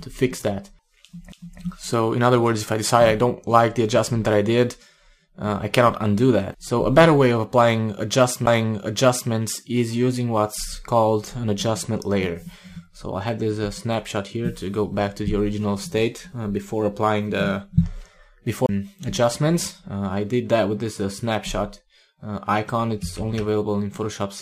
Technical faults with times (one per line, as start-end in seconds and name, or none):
1.32 CD skip
8.46 CD skip
18.66-18.69 CD skip